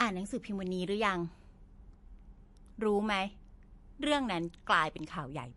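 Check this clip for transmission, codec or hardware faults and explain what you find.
One fault runs through the whole speech clip, likely MP3 compression. Starved of bits, the encoder discards the treble, leaving nothing above 11.3 kHz, and drops quieter frequency detail frame by frame. The damage is plainly audible as a dull, watery, swirling texture, which fits a low bitrate of around 48 kbps.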